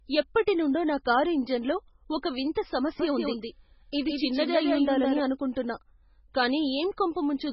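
From start to finish, the speech has likely been squeezed through heavy MP3 compression at a bitrate low enough to suggest something near 16 kbps. Starved of bits, the encoder drops weak frequency detail frame by frame and leaves nothing above 5.6 kHz, so the sound is dull, watery and swirling, with smeared attacks.

Between 3.00 and 5.20 s, a doubled audio track appears, likely because a second copy was captured by a slower path or held out of step in an edit. A clean, full-band repeat trails the original by roughly 150 ms at around 5 dB lower, without any decay or room colour, and it begins and ends abruptly.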